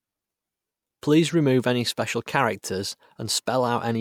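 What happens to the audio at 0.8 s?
Nothing goes wrong at 0.8 s; the speech carries on intact through that moment.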